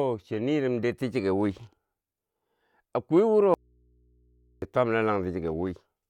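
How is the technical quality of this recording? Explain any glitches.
The recording has one clear glitch, an audio dropout to a faint residue. From 3.54 to 4.62 s, the speech cuts out abruptly for about 1.08 s. The gap is not silent. A low mains hum remains, about 40 dB below the speech. The likely cause is a loss of the source signal while the path after the break stayed live. That open input picked up hum. The speech then returns just as suddenly, unlike a pause or fade.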